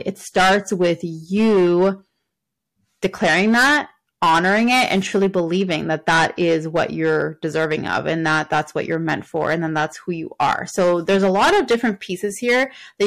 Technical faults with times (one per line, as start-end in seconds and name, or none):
0.00-13.06 hard clipping